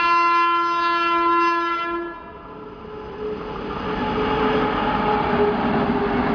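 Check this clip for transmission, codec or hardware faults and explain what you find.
No transmission, codec or hardware fault is audible anywhere in the clip.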